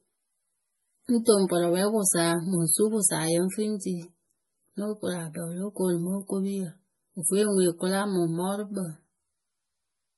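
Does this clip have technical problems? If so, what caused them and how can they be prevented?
Yes. Throughout the speech, nothing is heard above 11.5 kHz, and heavy watery, swirling artefacts smear the s sounds and attacks. Unlike a plain low-pass filter, the remaining band flickers as weak components drop in and out. This is likely MP3 compression, which fits a low bitrate around 32 kbps. To prevent it, encode at a higher bitrate or keep an uncompressed master.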